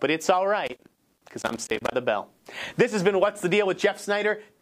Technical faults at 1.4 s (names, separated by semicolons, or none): loose connector crackle